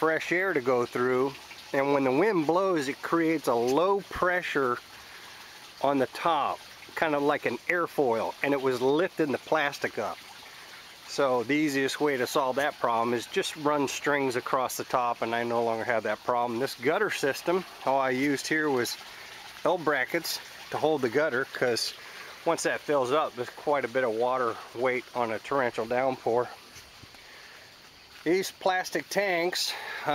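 Nothing stood out on listening; no technical faults could be heard anywhere in the audio.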